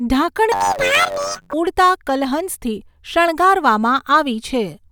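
From 0.52 s to 1.54 s the speech turns into a robotic buzz, the sound of planar audio read as interleaved. Each block stores all left samples followed by all right samples, but the reader treats it as alternating left-right pairs, so every block plays twice at double speed. Here the blocks last 10.67 ms, which fits a 512-sample buffer. At that size the fault gives a buzz at 93.8 Hz, with no clear octave jump in the speech.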